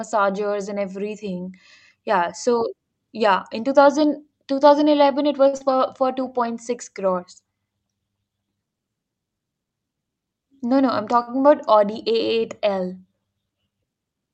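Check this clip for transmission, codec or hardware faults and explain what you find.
Yes, there are three kinds of transmission fault in this speech, all from the receiving end of a call. The audio comes through an Opus call path whose top end stops near 8 kHz, at a quality that fits about 48 kbps.

Short stall from a late packet: This occurs at 5.47–5.55 s and again at 11.22–11.29 s. Each time, a packet arrived late and the jitter buffer ran dry. The receiver held the last sound for 58 ms and then 54 ms before resuming. Nothing is lost, but a sound drags on with a faint buzz or dip.

Short concealed packet loss: This comes at 5.57–5.62 s, right after the first stall. About 40 ms of audio never arrived in time. The receiver covered 30 ms by extending the preceding sound, then blended back into the real audio. It is heard as a brief smear.

Jitter buffer speed-up: This runs from 10.52 to 11.13 s. 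Too much audio had built up in the buffer. The receiver trimmed tiny pitch-period slices repeatedly, removing about 50 ms in total. The speech plays at 108% speed with unchanged pitch and sounds hurried.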